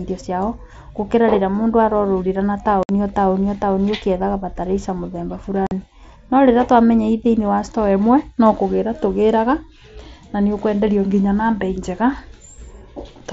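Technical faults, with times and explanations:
2.83 to 2.89 s and 5.67 to 5.72 s, unconcealed Bluetooth headset packet loss: the speech drops into two brief holes, about 60 ms and 45 ms long, that start and stop with hard edges. Short voice packets travelling from headset to phone went missing, and nothing smoothed over the gaps, so silence or an idle pattern replaced them. The surrounding mSBC wideband audio, with its light graininess, runs straight up to each cut.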